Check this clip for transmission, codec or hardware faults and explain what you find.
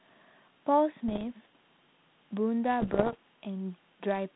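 There are bit errors on an ADPCM link in this speech, heard over the light, band-limited sound of 32 kbit/s G.726. From 1.08 to 1.25 s and again, more heavily, from 2.80 to 3.16 s, pops and rough bursts jump in level. Flipped bits throw the decoder's step size and predictor off, so each error rings on briefly.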